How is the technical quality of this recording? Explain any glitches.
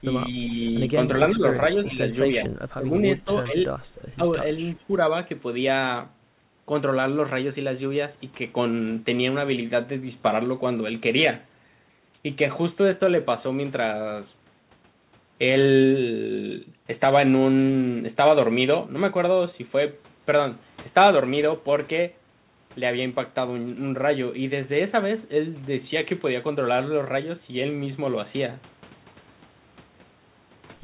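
The recording has two audible problems in its first five seconds, both likely from an echo canceller on a speakerphone call. The sound is band-limited with nothing above 4 kHz, which fits a narrowband G.711 mu-law call path.

Speech suppressed in double talk occurs at 1.32–2.02 s, 2.22–3.07 s, 3.45–3.55 s, 4.16–4.22 s and 4.73–5.0 s. With both ends talking, the canceller likely attenuated the near talker too. The speech dips by up to about 25 dB around 2.2–3.1 s. A waveform shows sudden envelope troughs, and a spectrogram shows faded energy bands.

An echo leak appears at 1.84–1.88 s. A faint copy of the speech returns about 0.39 s late, roughly 25 dB below the voice. It was probably residual loudspeaker pickup the canceller missed. It sounds like a brief ghost, and on a spectrogram it shows as a weak, delayed smear of harmonics.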